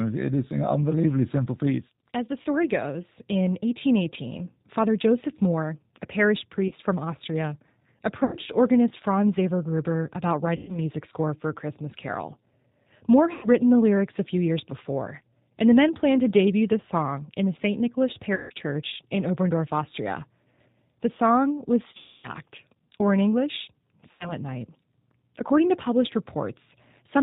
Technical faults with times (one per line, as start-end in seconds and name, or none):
0.00-27.22 G.729 codec
2.42-2.46 VoIP packet loss concealed by the speech codec
6.68-6.74 VoIP packet loss concealed by the speech codec
8.24-8.37 VoIP packet loss concealed by the speech codec
10.56-10.79 VoIP packet loss concealed by the speech codec
13.34-13.48 VoIP packet loss concealed by the speech codec
18.35-18.53 VoIP packet loss concealed by the speech codec
21.97-22.31 VoIP packet loss concealed by the speech codec
24.11-24.33 VoIP packet loss concealed by the speech codec